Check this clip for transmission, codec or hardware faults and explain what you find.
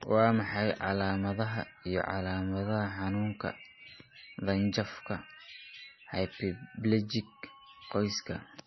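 One codec fault runs through the whole speech clip. MP3 compression, throughout: nothing is left above 5.9 kHz, and the heavy watery swirl likely comes from an encoder starved of bits, which fits roughly 24 kbps, dropping weak frequency lines frame to frame.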